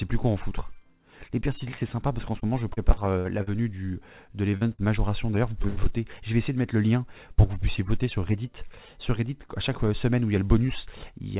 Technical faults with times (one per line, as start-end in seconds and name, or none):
2.40-3.49 repeated packet loss (robotic sound)
4.51-4.55 short concealed packet loss
4.57-4.80 burst of packet loss
5.62-5.88 short concealed packet loss
5.68-5.78 burst of packet loss